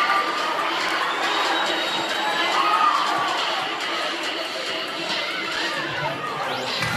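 A block of digital silence at 0.89 s: about 4 ms of audio drops to silence with no fade, so the abrupt cut and return produce a single sharp tick.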